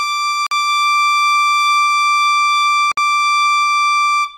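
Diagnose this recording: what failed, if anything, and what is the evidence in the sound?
Codec-stage failure: the music breaks into brief silences at 0.47–0.51 s (47 ms) and 2.92–2.97 s (57 ms). These are gaps at a join of encoded pieces, where each piece's encoder delay and end padding were never trimmed. Unlike a dropout, the music resumes exactly where it stopped, with nothing missing.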